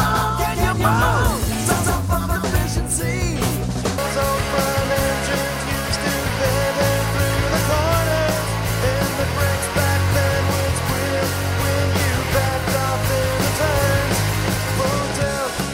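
From the start until 2.56 s, a doubled audio track: a second full-band copy about as loud as the original trails it by roughly a fifth of a second, likely from a second, slower capture path. Unlike echo, it has no decay or room colour, and it stops abruptly.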